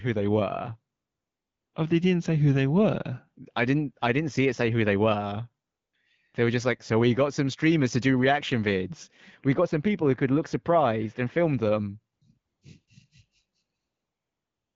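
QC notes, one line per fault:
0.95 to 1.73 s, 5.67 to 5.93 s, 12.15 to 12.21 s, 12.37 to 12.61 s, 12.87 s, 13.77 to 14.75 s: AMR comfort noise. In these gaps the sending side judged the talker silent and stopped transmitting speech frames, so the receiver generated a smooth, steady synthetic hiss from a rough level and spectral description instead of the real background. The noise floor switches character abruptly at each boundary, and the short bursts near 12.2 to 12.9 s make it flicker in and out. Quiet tails of speech at these edges can be clipped.
9.53 to 11.53 s: de-emphasis applied wrongly. A treble-cut filter intended to reverse pre-emphasis acted on audio that did not need it, tilting the response downward toward the top end so that 10 kHz sits about 13 dB below 1 kHz. Over these two seconds the sound turns dull and muffled, with consonant detail and air lost, then returns to normal brightness after 11.53 s. 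The AMR-WB path at 12.65 kbit/s contributes only light coding texture.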